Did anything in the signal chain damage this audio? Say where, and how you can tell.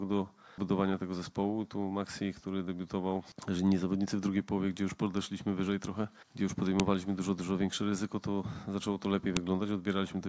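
Yes. There's a sharp, loud snap at 6.80 s and another at 9.37 s, each only a couple of milliseconds long and unrelated to what the sound is doing. That's a file header played as audio, which happens at the storage or file-assembly stage. WAV pieces were joined without stripping their headers, so those few dozen bytes of metadata got read as sample values. Each click marks where a new piece starts.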